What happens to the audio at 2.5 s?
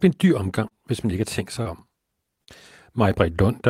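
From 2.44 to 2.51 s the speech shows short concealed packet loss. About 40 ms of audio arrived too late to decode, and the receiver bridged it by extending the preceding sound before blending back into the real signal. The result is a brief smear.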